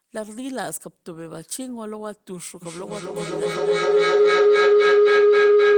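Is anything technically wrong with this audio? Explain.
Feedback howl begins at 2.62 s and runs to the end. Sound from a loudspeaker re-enters a microphone on the same call, gaining level each pass. It settles near 400 Hz, with the loop repeating about every 300 ms, and peaks about 15 dB above the speech.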